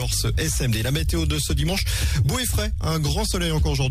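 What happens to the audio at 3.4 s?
Nothing goes wrong at 3.4 s; the audio plays through that moment intact, with no dropout, click or distortion.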